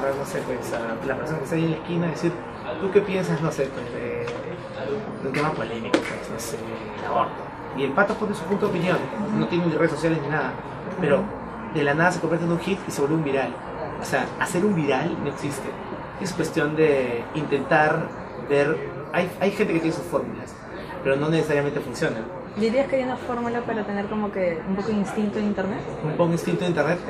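Nothing technically wrong can be heard in this audio. There are no faults to place in time or trace to a cause.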